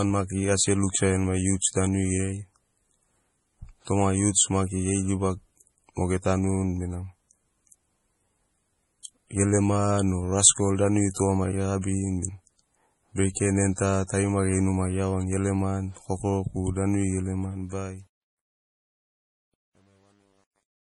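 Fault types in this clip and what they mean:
Low-bitrate audio saved at a high bitrate: the speech likely passed through a 32 kbit/s MP3 stage before being re-encoded at 320 kbit/s, so the larger file keeps the earlier damage, with nothing above 11.4 kHz and the artefacts of the first encoding throughout.
Truncation distortion on a fade: the fade-out from about 17.4 s was computed at only 10 bits without dither, so as the level drops the waveform collapses into coarse steps, turning gritty from 17.38 s and worst from 18.15 s to the end.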